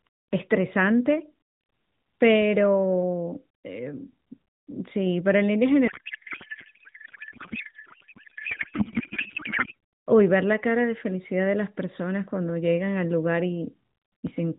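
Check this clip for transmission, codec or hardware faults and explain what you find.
One transmission fault is present in this speech clip, which is carried over narrowband AMR with only light coding damage and nothing above 4 kHz.

From 5.88 to 9.74 s there is a codec payload misread: octet-aligned AMR frames were decoded as bandwidth-efficient, shifting every field. The speech becomes garbled warbling noise that barely tracks it. Unlike packet loss, it stays continuous rather than gapping, and ends abruptly.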